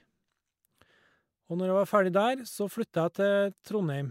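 No technical faults can be heard anywhere in the recording.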